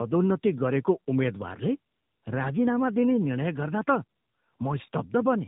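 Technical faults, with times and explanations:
Throughout, tandem speech coding: the signal crossed links using different codecs and was decoded and re-encoded at each border. The character points to two passes through AMR-NB at about 10.2 kbit/s with a G.711 mu-law link between them. The second AMR-NB coder had to model the first one's errors as if they were speech, so they compound. The speech sounds rough, muffled and warbly, with nothing above 3.8 kHz.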